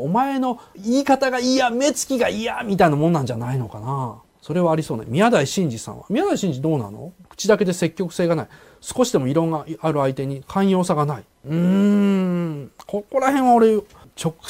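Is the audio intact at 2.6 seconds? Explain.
Yes, the audio is intact at 2.6 seconds, with no dropout, click, distortion or other disturbance at that point.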